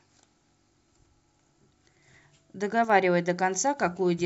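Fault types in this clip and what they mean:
One channel drops out: at 2.85 to 2.90 s the speech dips abruptly by about 6 dB for about 50 ms, then snaps back. The likely cause is one stereo channel briefly going silent, so the mono sum loses half its shared signal.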